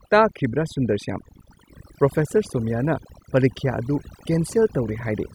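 Overdone noise removal runs throughout: the reduction was set so hard that quiet speech detail goes with the noise, leaving near-silent gaps with twinkling specks.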